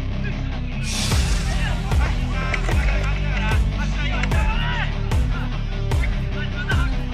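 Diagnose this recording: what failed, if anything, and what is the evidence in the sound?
Nothing in the recording points to a failure at any stage of the chain, so there's no fault to diagnose here.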